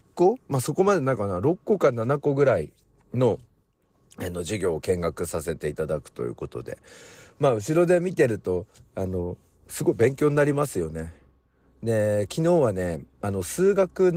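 The speech has no technical fault, and its full-band sound shows only the light touch of Opus voice compression.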